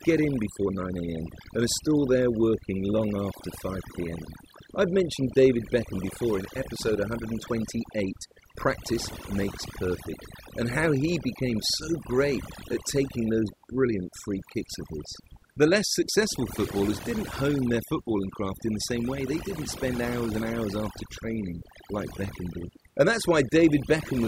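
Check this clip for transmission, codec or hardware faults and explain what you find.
The one problem running through the whole clip is overdone noise removal. A noise reduction stage was pushed far too hard on a noisy recording, so any frequency band sitting near its idea of the noise floor gets clamped down or switched off, and the softer parts of the speech get caught along with the hiss. You hear it as a background that drops and breaks up into little twinkling specks.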